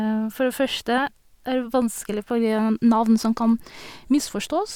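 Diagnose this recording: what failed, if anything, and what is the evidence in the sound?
Nothing failed in this recording.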